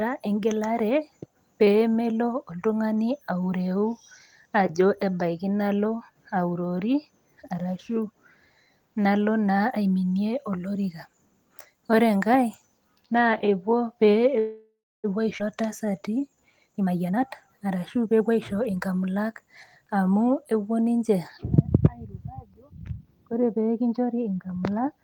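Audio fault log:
14.39–15.06 s, call audio freeze: Packets were likely held up in transit until the jitter buffer ran dry. The receiver stretched the last sound into a fading buzz or hiss that falls silent for the final 0.29 s of the 0.64 s gap, then resumes where it stopped, with nothing lost.
15.38–15.41 s, skip ahead: A stretch of audio was dropped while later audio was already waiting. Roughly 0.3 s of speech is missing, and the two sides are joined almost directly, so the speech lurches forward with only a tiny seam.
15.61–16.58 s, jitter buffer slow-down: With its reserve running low, the receiver repeated single pitch periods and bits of pauses over and over, adding 122 ms. Speech plays at 88% speed with unchanged pitch, so sounds are drawn out.
16.66–18.79 s, jitter buffer speed-up: Holding more audio than its target, the receiver repeatedly removed short pieces of one or a few pitch periods, about half a second in all. 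Speech plays at 121% speed at the same pitch and sounds hurried.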